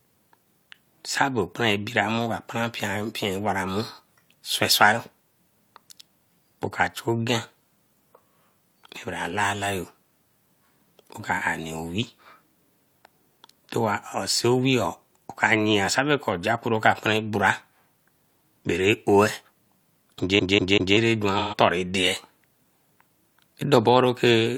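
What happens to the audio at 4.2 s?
Nothing goes wrong at 4.2 s; the speech carries on intact through that moment.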